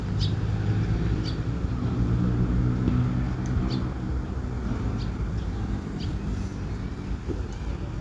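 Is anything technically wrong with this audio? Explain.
No, nothing in this audio stood out as technically wrong on listening.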